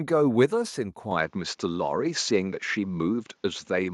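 From 1.11 s to the end, the speech abruptly narrows in band, with a level step near 5 dB and a new faint noise floor, likely an input switched to a poorer device rather than a plain filter.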